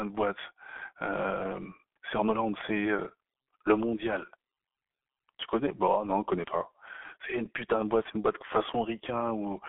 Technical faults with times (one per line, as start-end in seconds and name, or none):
0.00-9.69 G.723.1 codec